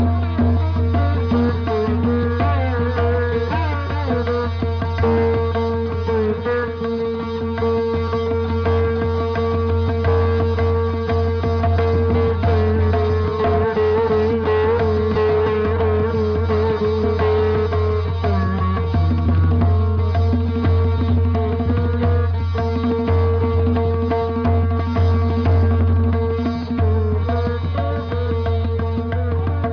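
Nothing is technically wrong with the clip.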